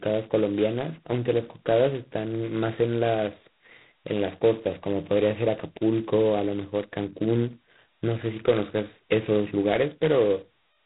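Throughout the clip the speech carries G.726 ADPCM coding at 16 kbit/s, with heavy damage. At this rate each sample is sent as only 2 bits describing its difference from a running prediction, so the quantisation error is large and rides on the signal itself. The result is a harsh, rasping hiss that swells and fades with the speech level. Steady background noise, by contrast, would persist in pauses. Nothing passes above 3.9 kHz, which gives it a telephone-band dullness.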